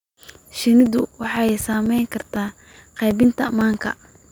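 Speech, with periodic USB or driver dropouts running from 0.86 s to 4.24 s: every 0.125 s, eight times a second, a few milliseconds of audio vanish into silence, giving about thirty evenly spaced ticks. The strict regularity points to a background task stalling the USB bus or audio driver on a fixed schedule. Random network packet loss or buffer underruns would leave irregular gaps, and these ticks appear only where there is signal.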